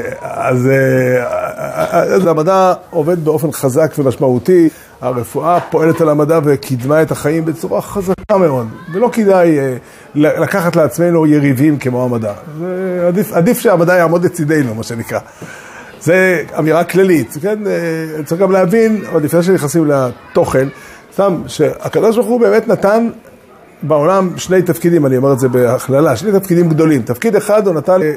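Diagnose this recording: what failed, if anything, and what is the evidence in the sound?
Three brief glitches break through the audio, at 2.23 to 2.25 s, 4.67 to 4.69 s and 28.01 to 28.03 s, each lasting only about 20 to 25 ms. This is damaged data in a compressed stream, a codec-stage failure. Corrupted bytes in the encoded file leave the decoder unable to read those frames, so it loses sync and hunts for the next valid frame header. Each momentary glitch is the audible trace of that misread stretch.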